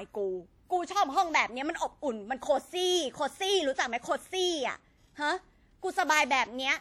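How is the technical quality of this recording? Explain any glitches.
The recording has one fault running through the whole clip: plainly audible WMA compression artefacts.

Throughout the speech there is a ringing, washy quality and a hiss that swells and fades with the signal. The likely cause is a transform codec such as WMA 1 at a low bitrate, around 48 kbps. Its long blocks smear quantisation noise across tens of milliseconds around each sound, and weaker spectral lines get zeroed. On a spectrogram this shows as blurred onsets, smeared noise around syllables, and patchy holes in the upper bands. Content still reaches about 20.1 kHz.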